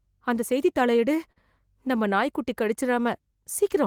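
At 1.32 to 1.38 s, just before "நம்ம நாய்க்குட்டி", there's a short stall from a late packet: the receiver stretched the preceding speech about 42 ms, holding it with a faint buzz or dip, then carried on with nothing lost.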